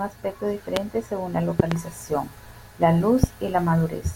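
A loud pop lands at 0.76 to 0.79 s, just before "según la", then a pair of pops at 1.60 to 1.74 s, right after "según la", and one more at 3.24 to 3.26 s. Each pop peaks at roughly 20 dB above the speech, which carries on underneath. The likely cause is a sudden voltage step or spike, from a plug, switch, static discharge or driver glitch, that the downstream circuits turn into a sharp thump.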